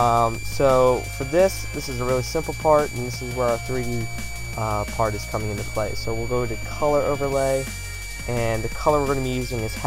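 From start to finish a switching supply whistle sits over the audio: a thin, high whine wandering between about 2.28 and 2.36 kHz, roughly 15 dB below the program. A nearby switch-mode power supply is cycling in an audible burst mode, so its switching rate leaks into the signal path. On a spectrogram it appears as a narrow horizontal line that drifts slightly in pitch across the whole clip. The waveform shows no clear change.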